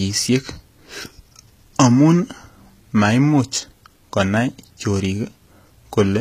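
From start to finish the speech carries plainly audible codec damage. The treble sounds bright yet synthetic: s sounds come out gritty and metallic, and nothing is present above 14.9 kHz. The likely cause is HE-AAC compression at a low bitrate, fitting something near 20 kbps, where the upper band is rebuilt by copying lower bands upward. Unlike a simple low-pass filter, the top end stays present but its harmonics don't match the lower spectrum.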